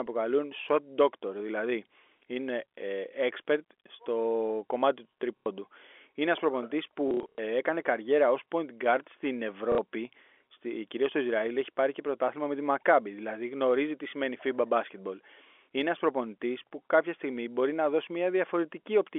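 At 5.38 s, just after "κομμάτι του", packet loss with the last packet repeated fills a 90 ms gap: the receiver replays the final good packet, producing a brief robotic buzz near 33 Hz, pointing to 30 ms packets. From 7.08 to 7.38 s, between "ένα προπονητή" and "έκανε καριέρα ω", 210 ms is lost in scattered bursts, the longest 90 ms. At 9.72 s, after "guard στην", a 60 ms stutter follows, heard through the G.711 telephone band.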